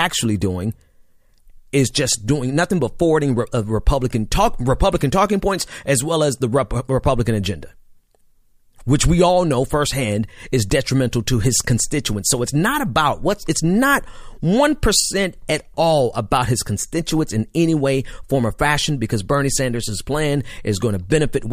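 Nothing stood out as a technical fault on listening to the recording.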